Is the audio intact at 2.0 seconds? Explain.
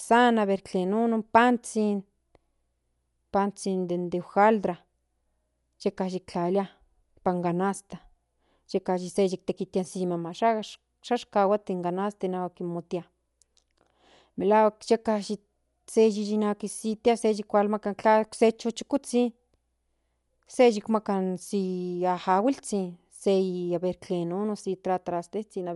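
No. At 2.0 seconds, as across the whole clip, the speech is dull, with nothing above 11.4 kHz and a rough, fluttering noise clinging to tonal parts. This is likely Dolby Digital compression at a low bitrate, which fits roughly 64 kbps. Short of bits, the encoder narrows the band and leaves many frequency lines without mantissa data, and the decoder fills those gaps with dither noise, producing the muffled top and grainy flutter.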